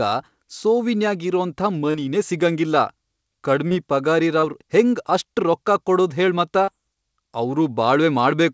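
It's a speech clip with short concealed packet loss in four places: 1.91–1.97 s, 3.68–3.74 s, 4.40–4.46 s and 6.65–6.70 s. Each time, about 30 ms of audio didn't arrive in time, and the receiver papered over the gap by extending the preceding sound before crossfading back. You hear that as a quick smear or wobble, and a short consonant can get swallowed. The band stops at 8 kHz, which fits a G.722 call path.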